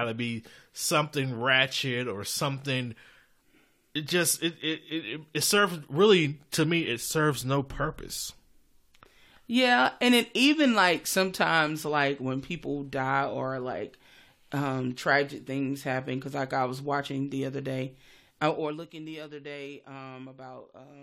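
Nothing stood out as a technical problem on listening to this speech recording.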